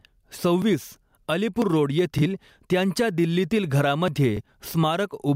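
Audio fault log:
throughout: gain pumping. The level swings by about 10 dB. Loud and quiet syllables sit unnaturally close together, which makes the speech sound squashed. The likely cause is input gain set far too high, with a fast limiter or compressor pulling it back down on each loud sound.
0.62 s, 1.62 s, 4.08 s: dropped buffer (overrun). At each of these the speech jumps forward. No gap of silence is heard. Roughly 20 ms of sound is missing each time, and the two sides are butted straight together, which makes the step audible. The likely cause is the recording program failing to read its samples before the hardware wrote over them, and the jump fits the loss of one buffer.
2.18–2.23 s, 4.37–4.41 s: Bluetooth stutter. In each of these spans a short slice of sound plays again, which gives a brief stutter. The repeated slice is about 23.2 ms long, which fits one lost or late packet. 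The receiver had no new data, so it replayed its last buffer to fill the hole. The speech then picks up further along, as if it had kept playing underneath.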